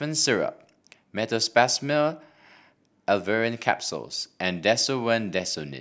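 No technical faults can be heard anywhere in the recording.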